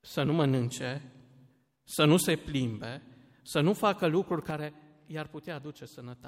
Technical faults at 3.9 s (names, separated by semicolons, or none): none